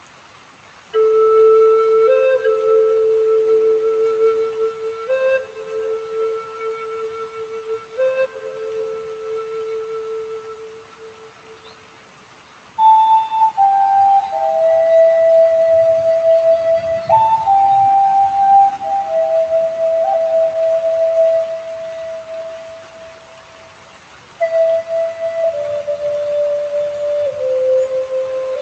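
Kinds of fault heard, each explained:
noise suppressor applied to music or sounds: The sound pumps and thins throughout, with held parts and tails sagging while sharp onsets stay up, for a level swing of around 10 dB. A noise suppressor built for speech was left running. It treats sustained tones, ambience and reverb as noise, pulls them down, and lets the gain back up whenever something sudden arrives, so the level keeps rising and falling unnaturally.
sound cut by the noise suppressor: Particular stretches sink noticeably, by as much as about 9 dB, at 0.0–0.94 s, 4.71–5.09 s, 5.42–7.99 s, 8.27–12.78 s, 21.46–24.4 s and 25.09–25.38 s. The longest dip lasts roughly 5 seconds. In these passages the suppressor judged the steady or fading material to be noise and cut it harder than everything else, shortening decays, while abrupt transients mostly came through.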